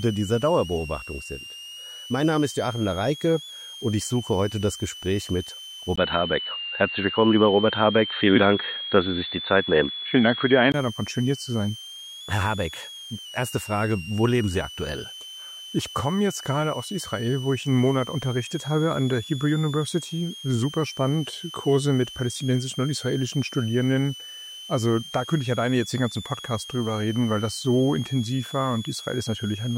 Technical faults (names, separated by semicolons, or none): switching supply whistle; input switched to a poorer device